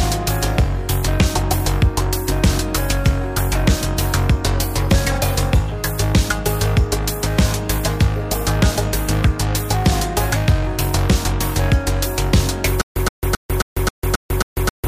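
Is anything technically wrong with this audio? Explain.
Yes. From 12.81 s to the end there is a stutter with silent gaps, likely from the player or stream stalling and, on each retry, replaying the last fragment it still held before running dry again. The result is a 120 ms burst of the same sound repeated seven times at a steady 268 ms pace, each separated by about 148 ms of dead digital silence. Whatever should have played in those final seconds never arrives.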